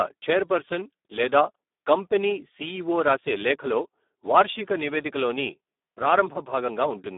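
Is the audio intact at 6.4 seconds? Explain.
No. At 6.4 s you're hearing the same Speex codec damage that runs through the whole clip. At this low quality setting, which fits a bitrate around 8 kbps, the encoder has very few bits left to model the excitation, so the speech comes out hoarse, noisy and edging toward robotic. The band is squeezed to about 250 Hz to 3.6 kHz, and there's nothing at all above 3.8 kHz, so it sounds thin and muffled too.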